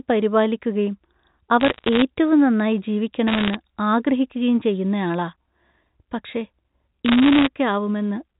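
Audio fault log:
1.60–2.02 s, 3.28–3.55 s and 7.06–7.47 s: bit errors on a digital phone line. In each burst, flipped bits in the mu-law G.711 stream corrupt single samples. Hits on the sign bit or upper bits throw a sample far from its true value, giving sharp ticks, and the rate, on the order of one percent, makes them crackle over intact speech. The waveform shows isolated one-sample spikes, and the spectrogram shows thin vertical lines reaching the 4 kHz band edge.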